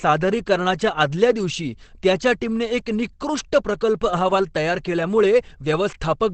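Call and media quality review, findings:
Opus compression, throughout: speech muffled and hoarse, nothing above 8.5 kHz; likely low-rate SILK speech mode, wideband, which fits roughly 16 kbps.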